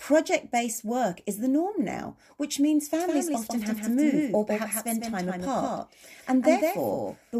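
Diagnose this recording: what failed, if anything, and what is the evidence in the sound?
A doubled audio track appears at 3.00 s, just after "norm now which means", and runs to the end. A second, full-band copy of the speech trails the original by roughly 150 ms at about 5 dB lower level, switching in abruptly with no decay or room colour, so it reads as a clean duplicate rather than an echo. The likely cause is a second, slower capture path or routing stage mixing in a delayed copy of the same signal.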